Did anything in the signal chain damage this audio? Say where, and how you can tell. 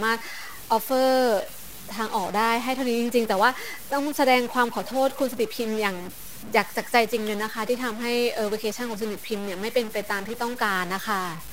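Yes. A stuck bit runs through the whole speech clip, and the damage most likely happened at the converter or on its digital data lines, where one bit is held fixed. The speech carries a harsh, buzzy grit from start to finish, and the pauses don't go quiet. They fill with a steady noise floor. Since the stuck bit's weight sits somewhere around -35 dBFS, about half the samples jump by that amount, depending on the waveform and on the sign of the small values between phrases.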